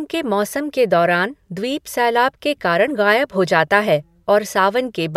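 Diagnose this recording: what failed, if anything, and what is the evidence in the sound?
Nothing failed in this recording, and the sound gives no evidence of a fault at any stage.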